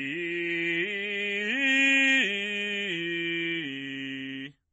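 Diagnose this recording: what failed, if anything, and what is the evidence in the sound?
The codec stage is where this music went wrong, and it's likely MP3 compression. Nothing comes through above 8.1 kHz for the whole clip, and the coding damage is plainly audible. That fits a starved encoder, probably around 32 kbps, lopping off the treble and dropping weaker frequency lines.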